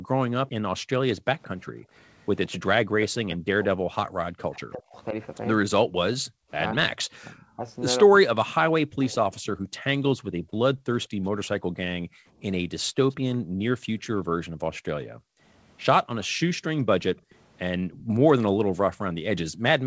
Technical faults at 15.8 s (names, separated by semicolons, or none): background gated by the echo canceller; echo leak